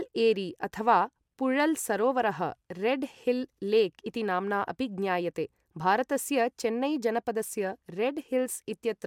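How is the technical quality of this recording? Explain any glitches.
No audible glitches or faults.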